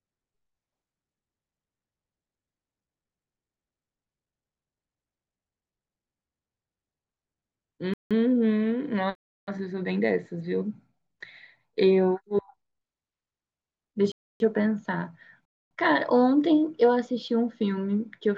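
Speech with four blocks of digital silence, at 7.94, 9.15, 14.12 and 15.45 s, lasting 0.17 to 0.32 s. Each likely comes from output buffers not filled in time; the first gap fits an 8192-sample buffer.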